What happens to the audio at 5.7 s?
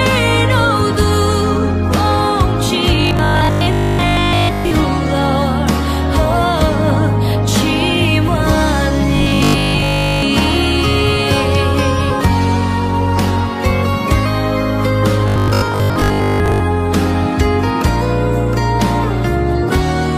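Nothing goes wrong at 5.7 s: the audio plays through that moment intact, with no dropout, click, glitch or other fault.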